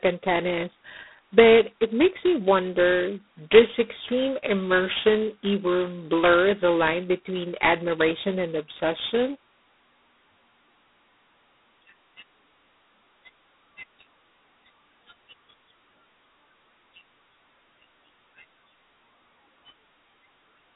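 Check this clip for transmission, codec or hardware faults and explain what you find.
One codec fault runs through the whole speech clip: G.726 ADPCM at a low rate. The codec sends only a coarse difference between each sample and an adaptive prediction. The heavy quantisation noise points to 2 bits a sample, which fits G.726 at 16 kbit/s. The result is a harsh, rasping hiss that rises and falls with the speech level. The line band runs from about 250 Hz to 3.7 kHz, and nothing passes above 3.9 kHz.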